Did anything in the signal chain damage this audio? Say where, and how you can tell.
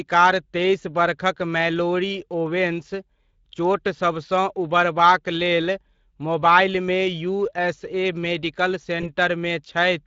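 Yes. The damage sits at the codec stage throughout. The speech has a hoarse, grainy texture from start to finish, and the degradation is plainly audible. That is the signature of the Speex codec, a CELP coder that rebuilds the voice from a pitch predictor and a coarse excitation. With too few bits for that excitation, the fine detail of the voice is replaced by noise. The bitrate is around 20 kbps.

The second fault is at the network stage, near the end. From about 9.01 s to 9.09 s the speech smears into a brief buzzy tone or coloured noise that fades. This is VoIP packet loss concealed by the speech codec. The gap fits a single lost 20 ms frame. The decoder filled it by repeating its last pitch and filter at falling gain. Because each frame builds on the one before, the distortion lingers until about 9.09 s, well past the 20 ms loss itself.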